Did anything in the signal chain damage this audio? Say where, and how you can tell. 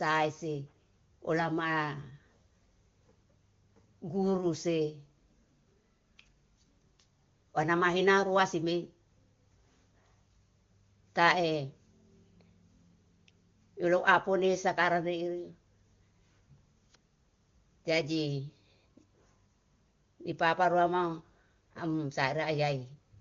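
No, nothing in the chain has done real harm here: it's speech carried over the AMR wideband (HD Voice) codec at its top rate of 23.85 kbit/s, where the codec leaves only a faint trace at most.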